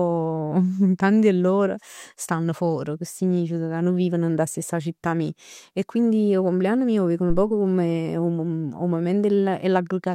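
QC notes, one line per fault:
7.30–7.47 s, phantom power thump: right after "mij 'o veg nu" a supply switched on or off on a live input, and the step through the coupling capacitors gives a deep thump peaking at about -13 dBFS, decaying in about 38 ms. Waveform shows a sharp offset excursion; spectrogram shows a low-frequency smear.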